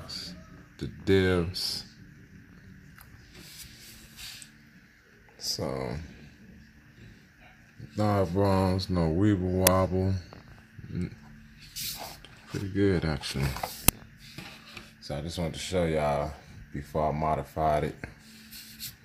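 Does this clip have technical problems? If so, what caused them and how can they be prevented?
Yes. Two uninitialised buffer bursts occur, at 9.67 s and 13.88 s, each a single loud crack lasting about 5 ms. A block was played before any audio was written into it, so leftover memory came out as samples; unlike a dropout, loud garbage replaces the sound instead of silence. Zero-fill every buffer before it is queued for playback.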